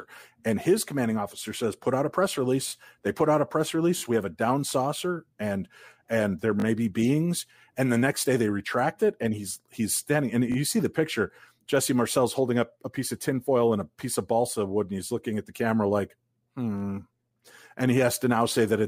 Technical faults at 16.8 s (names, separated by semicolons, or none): repeated buffer